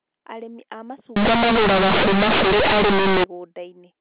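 Companded audio read as linear from 1.16 to 3.24 s in this speech clip: A-law telephone bytes are played as plain 8-bit samples without expansion, giving loud, buzzy distortion and heavy noise in pauses.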